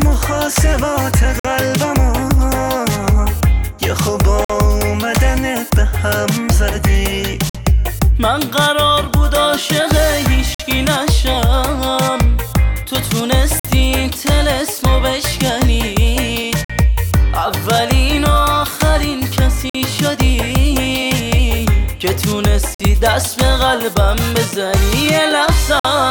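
From 1.40 s to 25.85 s there is a gap between chunks every 3.05 s, nine in all. The audio arrives in 3-second chunks, and each join adds 50 ms of silence. No sound is lost. Each gap is a short hole at a steady rhythm.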